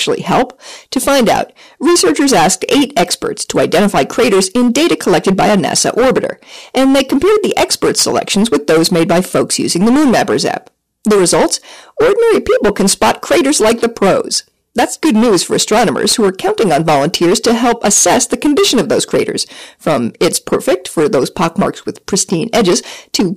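Hard clipping runs throughout this speech clip: driven about 16 dB past the ceiling, roughly 15% of samples flatten, adding high harmonics heard as harsh fuzz.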